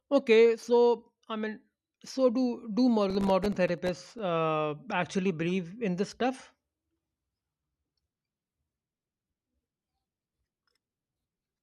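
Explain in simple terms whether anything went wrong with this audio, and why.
Processor overload crackle hits from 3.10 to 4.19 s, right after "mean so do do". The computer handling the audio fell behind and repeatedly failed to deliver its tiny chunks of sound on time, chunks that seem to be only about a millisecond and a half long. Each miss left a brief hole of silence with abrupt edges. Around thirty such holes in quick succession are heard as a gritty, crackling tear across the speech, which stops once the processor catches up.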